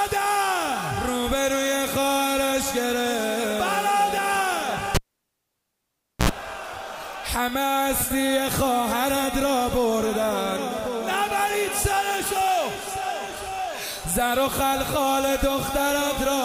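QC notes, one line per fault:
4.95–6.29 s, cable pulled and plugged in: a live cable is pulled out and pushed back in, so a pop opens the gap and about 1.3 s of near silence follows. As the plug goes back in, only the tip makes contact for about 73 ms, which lets in a burst of 60 Hz mains buzz, and a second pop marks the sound's return.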